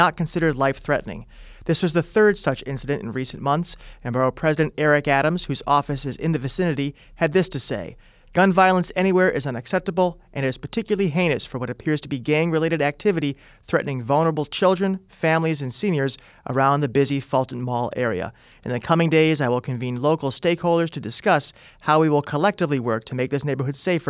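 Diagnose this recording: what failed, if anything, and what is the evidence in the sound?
Nothing failed in this recording.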